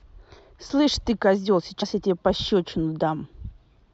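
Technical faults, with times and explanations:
1.81 to 1.83 s, compressed frames skipped: a short run of coded frames never reached the output, either lost from the file or rejected by the decoder as corrupt, so playback leapt forward by around 70 ms of speech. That jump points to roughly three frames of about 23 ms each. At the seam the speech comes out abruptly further along.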